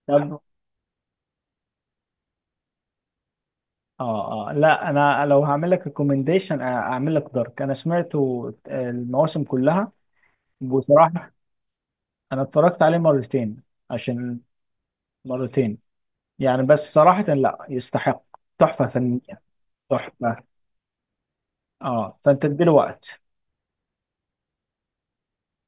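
Speech recording; no technical faults can be heard.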